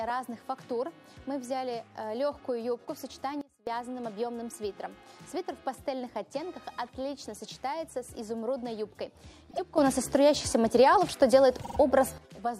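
The audio has two sudden gain jumps, with sound and background shifting level together: down about 24 dB from 3.41 to 3.67 s, and up about 12 dB from 9.78 to 12.18 s, likely from gain settings applied without a ramp. Repeated frames cause stutters: a 24 ms block plays two extra times at 9.49 s, adding 48 ms, and a 48 ms block plays three extra times from 11.61 to 11.77 s, adding 144 ms.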